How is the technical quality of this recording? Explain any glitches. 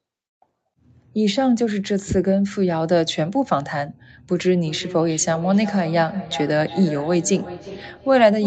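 The recording has one clear glitch: feedback echo between two devices, heard from 4.45 s to the end. The speech is band-limited with nothing above 8 kHz, which fits a call codec path.

Feedback echo between two devices, from 4.45 s onward: a second device in the room replays the call, this microphone captures it again, and neither echo canceller removes the other device's sound. Words return roughly every 0.4 s, thinner and ringing, peaking about 13 dB below the speech.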